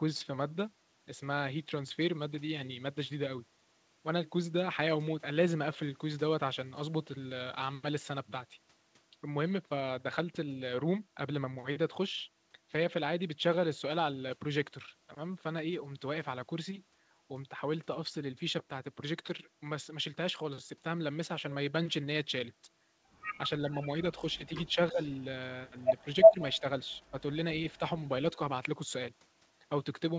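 At 23.74 to 23.83 s a faint delayed copy of the speech appears, about 25 dB below it. It trails by 351 ms. This is an echo leak, likely from a far-end loudspeaker whose echo canceller let some pickup through.

From 24.35 to 25.0 s the talker drops in short pieces, roughly 150 ms in all, by about 15 dB at worst. This is speech suppressed in double talk. The canceller likely mistook overlapping speech for echo.

From 25.02 to 25.24 s the echo returns, about 30 dB down, again 351 ms late.

From 25.71 to 26.64 s the speech dips again, about 10 dB, for roughly 150 ms in all.

From 25.79 to 27.0 s the echo leak is strong, about 15 dB louder than the speech. It is an obvious second voice 351 ms behind.

At 27.0 to 27.14 s a final dip of about 10 dB lasts roughly 40 ms.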